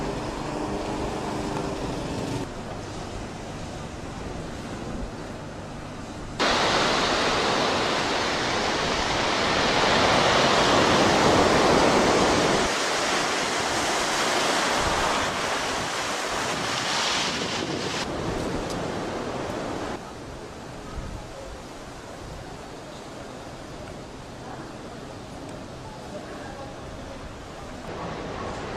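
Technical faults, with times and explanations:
12.93–13.45 s, 15.06–15.83 s, 24.58–24.91 s and 26.82–27.59 s, DAB burbling: with bit errors around 0.4 to 0.5 percent, corrupted MP2 samples and scale factors slip past error correction, so single sub-bands get short noise blips and jump in level for up to a frame, giving burbling blips over the sound.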